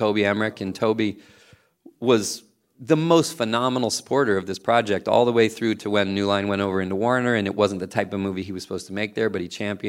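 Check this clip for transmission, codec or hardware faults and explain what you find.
No transmission, codec or hardware faults are audible anywhere in the speech.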